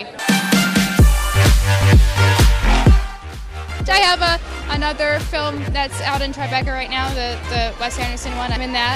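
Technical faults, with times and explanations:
No technical faults, with times and explanations, are present.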